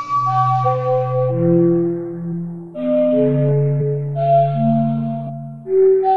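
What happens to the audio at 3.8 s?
Compressed frames skipped: at 3.77 to 3.80 s about two whole frames of the music go unplayed, which fits frames near 46 ms long, so playback jumps ahead roughly a tenth of a second.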